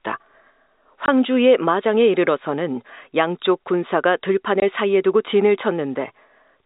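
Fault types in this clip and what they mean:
Packet loss filled with silence: twice, at 1.06 and 4.6 s, the speech drops out for 20 ms. That fits a single lost 20 ms packet each time, replaced by silence. The band-limited G.711 telephone sound carries straight through.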